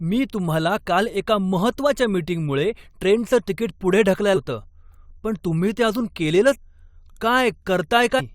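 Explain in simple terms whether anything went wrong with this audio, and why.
Three short glitches break into the speech, at 4.35 to 4.37 s, 6.54 to 6.56 s and 8.19 to 8.21 s. Each is a quick chirp or blip lasting about two hundredths of a second. The fault is damaged data in a compressed stream. A small piece of the compressed file was wrong at those points. The player could not read it, briefly lost its place, and jumped to the next piece it could read.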